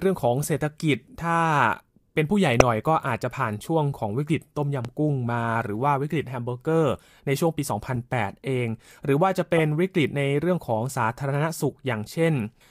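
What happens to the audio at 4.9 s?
A single loud pop sits on the speech from 4.85 to 4.88 s, peaking about 10 dB above the surrounding level. It is likely a sudden voltage pulse, from a plug, switch, static discharge or driver glitch, entering the signal path and being shaped by the circuitry after it into a brief thump. Unlike a dropout or buffer glitch, nothing is removed: the speech carries on uninterrupted underneath, with the pop layered on top.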